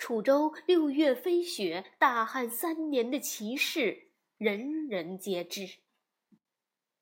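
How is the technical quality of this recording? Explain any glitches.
Nothing here sounds off to me: I couldn't pick out a single glitch anywhere in the recording.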